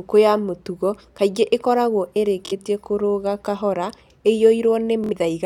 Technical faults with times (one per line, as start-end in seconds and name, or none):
2.46-2.53 Bluetooth stutter
5.04-5.13 Bluetooth stutter